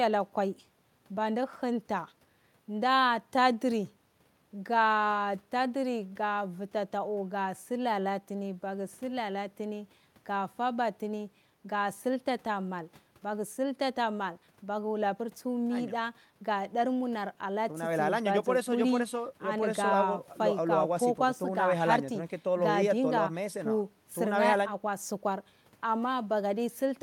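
No technical faults can be heard anywhere here.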